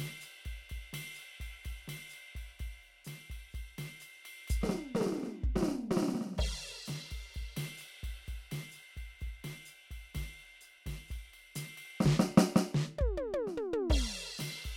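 The music carries no audible technical faults anywhere in the recording.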